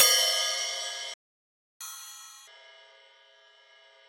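The player most likely ran short of data or had its thread blocked at 1.14 s, a playback stall: output drops to silence mid-flow for about 0.67 s, until 1.81 s, and the sound then resumes where it had stopped.

From 1.81 s to 2.48 s the player works off its backlog with catch-up at higher speed, resampling the audio to run at double speed. Everything is rushed and pitched up by roughly ten semitones, then settles back to normal speed and pitch.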